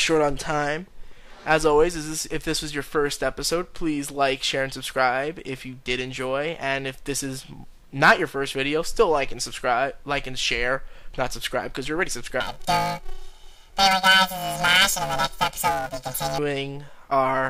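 From 12.40 s to 16.39 s the audio turns into a robotic buzz, the sign of planar audio read as interleaved. Each 128-sample block (about 2.67 ms) stores all its left samples before its right ones, but is played as alternating pairs, so every block runs twice at double speed. Because the blocks are this short, the pitch doesn't jump an octave. Instead a buzz at the 375 Hz block rate dominates, unlike long-block cases, where an octave rise with flutter is heard.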